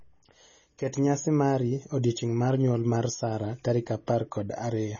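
Speech, with MP3 compression damage running through the whole clip. The audio has no content at all above 6.9 kHz, a hard band limit that leaves the sibilants dull and the overall tone boxed-in. The heavy, watery swirl on the remaining band fits an encoder short of bits zeroing weak frequency lines that flicker on and off between frames. The likely cause is MP3 encoding at a very low bitrate, which fits roughly 24 kbps.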